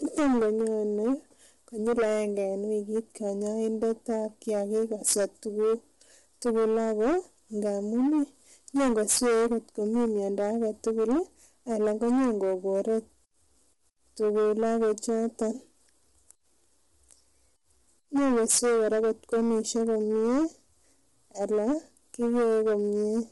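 From start to finish the speech is pushed well past the limit of some stage in the chain, so its peaks are sliced flat. This is hard clipping: the level sits about 21 dB beyond what the stage can pass, and around a tenth of all samples land on the ceiling. The result is a constant harsh fuzz on every loud syllable, not occasional crackle. The sharp corners of the flattened tops give it a gritty, buzzing edge. Soft saturation or a limiter would only round or thicken the peaks.

Running through the whole clip as well, the voice sounds rough and grainy, with a hiss-like texture filling the gaps between its harmonics and nothing at all above 11.6 kHz. The likely cause is low-delay AAC compression (AAC-ELD) at a rate that fits about 32 kbps. Its very short frames cannot separate the pitch harmonics cleanly, so the coder's noise shows plainly. Ordinary long-frame codecs at similar rates tend instead to smear or warble, and a simple low-pass filter would leave the remaining band clean.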